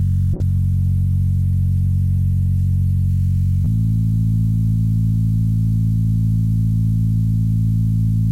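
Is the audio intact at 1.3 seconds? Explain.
No. At 1.3 s the audio is inside a call bitrate drop running from 0.36 to 3.16 s. A fall in the estimated bandwidth forced the encoder from 128 kbps down to 22 kbps, so the sound is coded coarsely and loses its high frequencies, coming across rough, watery and muffled.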